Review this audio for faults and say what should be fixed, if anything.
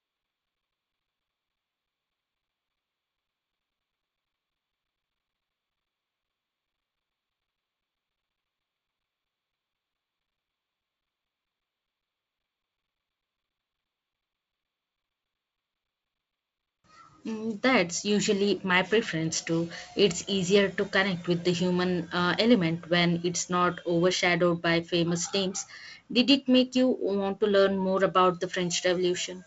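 Nothing stood out on listening to this speech clip, so there is nothing here that needs fixing.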